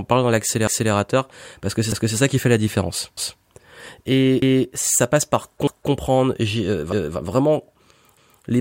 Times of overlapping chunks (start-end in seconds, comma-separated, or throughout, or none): 0.67-0.92, 1.92-2.17, 3.17-3.42, 4.42-4.67, 5.67-5.92, 8.17-8.42